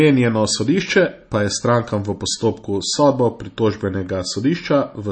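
From start to finish the speech has a watery, swirly edge, with nothing above about 8.4 kHz. That's likely MP3 compression squeezed to something like 32 kbps: the encoder chops the treble and lets weak frequency lines flicker on and off between frames.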